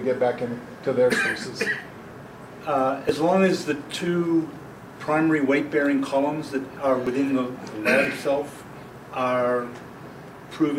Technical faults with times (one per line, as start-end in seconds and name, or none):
1.12 overlap between stream segments
3.09 overlap between stream segments
5.08 overlap between stream segments
7.07 overlap between stream segments
8.05 overlap between stream segments